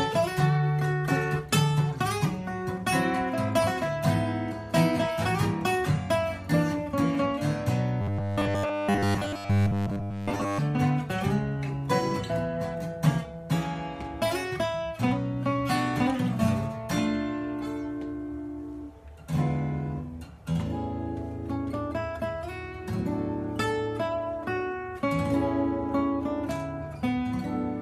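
From 8.02 to 10.59 s the sound becomes a rigid metallic buzz at 100 Hz: robotic sound, likely from repeating about 10 ms buffers over most of the audio.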